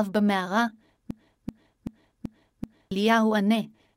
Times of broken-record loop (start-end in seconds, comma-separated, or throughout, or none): 1.11-2.91